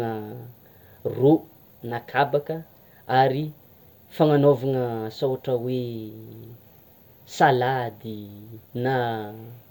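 No technical faults can be heard anywhere in the speech, so there is nothing to describe in time order.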